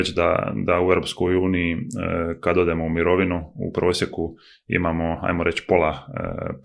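Nothing technical goes wrong anywhere in this speech recording, so there's no fault to point to at any moment.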